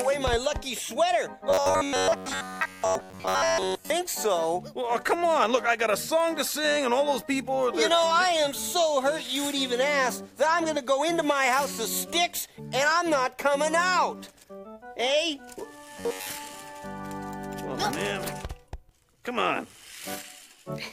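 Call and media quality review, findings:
Robotic sound from repeated short buffers, 1.50–3.90 s and 15.98–16.30 s. Rigid metallic buzz at 93.8 Hz, tracking the sound only loosely. Likely cause: audio arriving too seldom at the playout buffer, with the last ~10.7 ms looped to fill gaps and most real audio skipped. Spectrogram: evenly spaced horizontal harmonic lines at 93.8 Hz multiples. Waveform: identical short cycles repeating back-to-back.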